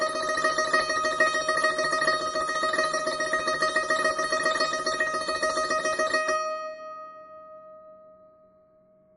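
MP3 compression damage runs throughout the music. Nothing is heard above 10.6 kHz, and weak detail below that comes and goes in a watery, swirling way, with metallic chirping in the bright top end and smeared attacks. The cause is likely an MP3 encoder starved of bits, consistent with a rate near 32 kbps. It drops the treble at a fixed point and zeroes quiet frequency lines that flicker on and off between frames.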